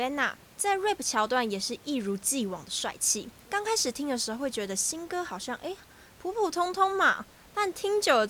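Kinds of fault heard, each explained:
No faults can be heard in this speech clip. The room noise sits underneath, about 26 dB below the speech, and belongs to the recording space rather than the system.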